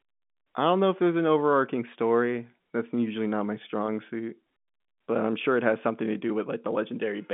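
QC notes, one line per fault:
No faults found; the speech runs over G.711 A-law telephone coding at 64 kbps, with a line band of 150 Hz to 3.5 kHz and nothing above 3.8 kHz.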